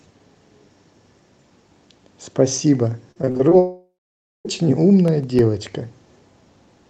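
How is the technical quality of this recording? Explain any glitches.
The recording has three audible glitches, all packed between about 3.1 and 5.8 seconds. The audio travels through a call codec, and its top end stops at about 12 kHz, which fits Opus at a modest bitrate.

Repeated packet loss (robotic sound) runs from 3.11 to 3.53 s. Six short holes open in quick succession, the longest 42 ms. Each one is patched by stretching the last sound. About 37 percent of that stretch is concealed, so it turns choppy.

A long network dropout follows, from 3.59 to 4.47 s. About 860 ms of audio is lost. The receiver first extends the last sound as a fading buzz. Then roughly half a second of silence remains. A network outage is the likely cause.

CD scratch ticks appear from 4.93 to 5.85 s. Seven tiny clicks, the longest only about 2 milliseconds, come at a steady rate of about eight per second. 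A scratch defeats the disc's error correction once per revolution. The player patches the damage, leaving these regular ticks.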